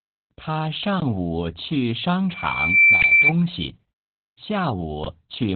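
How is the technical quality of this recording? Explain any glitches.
The recording has poor technical quality, with three distinct problems.

Opus voice compression runs through the whole speech clip. The coder sounds starved, which points to roughly 8 kbps in SILK narrowband mode. It cuts everything above 4.3 kHz and quantises the excitation coarsely, so the voice comes out muffled, hoarse and faintly robotic.

A loudspeaker feedback squeal runs from 2.29 to 3.33 s. The microphone re-captured its own loudspeaker output, and at 2.3 kHz the loop gain passed unity. That tone swells over about half a second to roughly 10 dB above the speech.

A gap between chunks opens at 3.02 to 3.04 s and again at 5.04 to 5.06 s. The audio arrived in 2-second pieces, with about 20 ms of silence left between them. Nothing is lost, but each join becomes a brief hole of silence.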